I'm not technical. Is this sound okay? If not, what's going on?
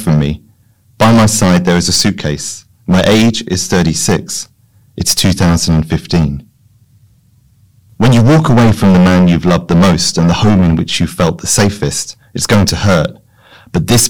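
No. The speech has a harsh, fuzzy buzz on every loud syllable from start to finish. This is hard clipping: the recording was pushed far louder than the equipment could handle, so roughly a tenth of the sound gets its peaks chopped flat.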